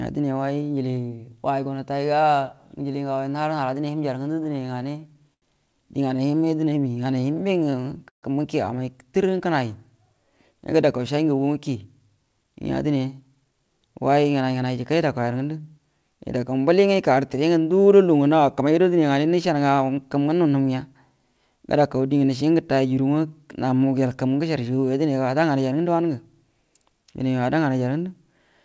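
From 4.24 to 5.44 s the audio stutters with repeated stalls: packets arrived late twelve times, and the receiver bridged about 194 ms by continuing the last sound, the longest hold 83 ms. On a spectrogram, harmonics smear into flat horizontal bands at each hold, and the waveform shows repeated, slightly faded copies of one cycle.

Between 6.17 and 6.20 s a short stall from a late packet stretches one sound by about 15 ms, a brief flat-topped plateau in the spectrogram before the stream resumes in place.

A jitter buffer slow-down follows from 6.31 to 7.72 s. Repeated single pitch periods add 149 ms, so the audio plays at 90% speed with unchanged pitch. The waveform shows near-identical periodic cycles lined up, and the spectrogram shows stretched syllables without any downward frequency shift. A second stutter overlaps it from 7.13 to 8.25 s, with five gaps totalling 170 ms. The longest is a 138 ms hold, which appears as a long frozen band that fades in level. 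A second, smaller slow-down runs from 9.23 to 9.69 s at 89% speed and adds 56 ms.

From 11.68 to 14.77 s a jitter buffer speed-up removes roughly 0.4 s of short pitch-period pieces to shed excess delay. The audio runs at 111% speed at the same pitch and sounds hurried. The spectrogram looks time-compressed, with syllables closer together and harmonics steady.

Throughout, nothing appears above 8 kHz, consistent with the G.722 call path.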